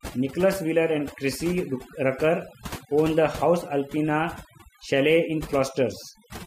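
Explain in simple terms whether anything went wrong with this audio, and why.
Something did go wrong here: this speech clip has overdone noise removal running the whole way through. Someone turned a noise reduction tool up too far, so it shuts off any slice of the sound it mistakes for background hiss. The quieter bits of the voice get swallowed along with the noise. That's why the pauses drop to near silence with little twinkly specks.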